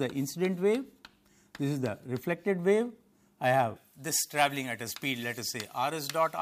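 From 3.76 s to the end, pre-emphasis is left on: the treble lift applied ahead of recording or transmission was never undone by its matching de-emphasis. The top end sits about 11 dB high at 10 kHz relative to 1 kHz, a tilt that fits a J.17 curve, so the sound turns thin, bright and hissy.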